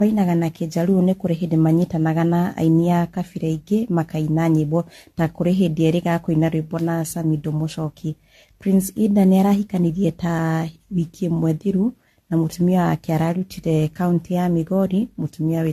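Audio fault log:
Throughout, generation loss: the speech sounds swirly, hollow and smeared, with blurred attacks and nothing above 14 kHz. This is more damage than a single pass would leave, likely from around five rounds of AAC-LC coding near 64 kbit/s, each requantising on a shifted frame grid.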